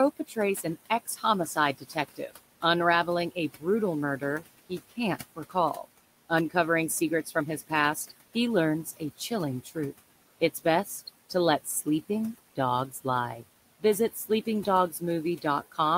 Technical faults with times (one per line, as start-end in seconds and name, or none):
0.00-15.97 noise suppressor artifacts
0.19-2.63 speech cut by the noise suppressor
4.19-6.55 speech cut by the noise suppressor
7.25-9.76 speech cut by the noise suppressor
10.41-13.05 speech cut by the noise suppressor
13.80-15.97 speech cut by the noise suppressor